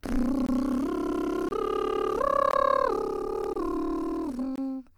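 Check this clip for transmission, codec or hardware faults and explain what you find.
The music has one fault: a gap between chunks, repeating five times at 0.46–0.49, 1.49–1.51, 2.51–2.53, 3.53–3.56 and 4.56–4.58 s. The audio arrives in 1.0 s chunks with 23 ms of silence inserted at each join, so the music cuts out briefly, producing short holes at regular intervals.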